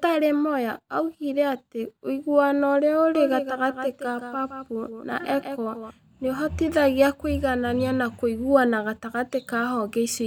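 From 3.15 s to 5.91 s the speech carries a doubled audio track: a second, full-band copy trails the original by roughly 150 ms, sitting around 10 dB lower. The likely cause is the same signal reaching the mix twice, once through a slower path. Unlike room echo or reverb, the copy never decays and has no room colour. It switches on and off abruptly at those two points.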